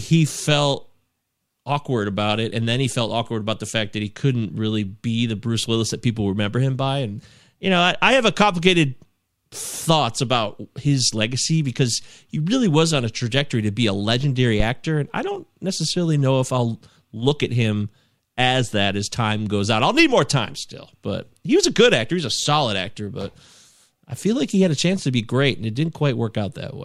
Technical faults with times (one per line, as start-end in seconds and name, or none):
14.60-14.68 phantom power thump